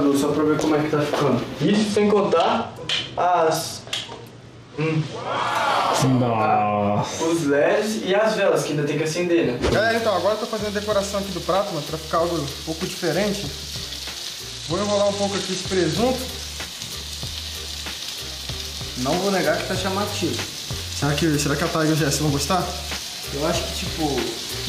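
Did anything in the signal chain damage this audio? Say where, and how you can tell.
Yes. Throughout, loud and soft parts sit closer in level, the gain swinging around 10 dB, leaving everything squashed. This is gain pumping, likely from input gain set far too high with a fast limiter clamping down.

From 1.62 to 5.50 s and 14.50 to 15.93 s, the treble dulls and a gritty noise rises, then clears. That is a Bluetooth SBC bit pool drop at the codec, which fits the bit pool falling from 28 to 12 (about 96 kbps), starving the top sub-bands.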